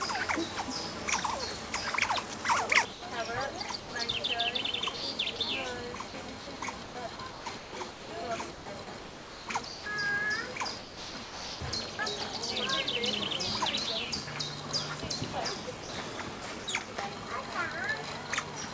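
Sound dropped by the voice detector occurs at 2.93–3.02 s, 3.80–3.92 s and 15.83–15.89 s. Each time the audio gives way to steady noise for 60 to 120 ms and then returns, most likely because a sender-side detector judged it background and the receiver filled with comfort noise. Sound chopped by the voice detector differs because the detector likely toggles repeatedly within one stretch, so the audio turns choppy. This happens at 4.97–5.39 s, 6.08–9.86 s (about 1.7 s filled), 10.79–11.99 s (about 0.75 s filled) and 16.64–16.88 s. Through the call path, nothing is heard above 8 kHz, which fits G.722.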